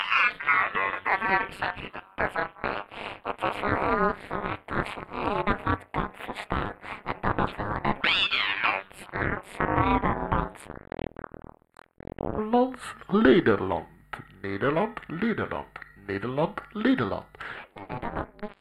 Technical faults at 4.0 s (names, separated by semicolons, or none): channel delay (comb filtering)